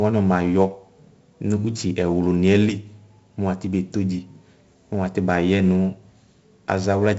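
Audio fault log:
Throughout, 4-bit ADPCM compression. Each sample is stored as a small 4-bit step from a predicted value, and the step size adapts as the speech moves. The error this leaves is heavy here. A gritty hiss rides on every loud syllable and rises and falls with the level. Sharp onsets sound rough because the step cannot grow quickly enough. Nothing sounds above 7.7 kHz, so the speech is dull, which fits a 16 kHz rate at 64 kbps.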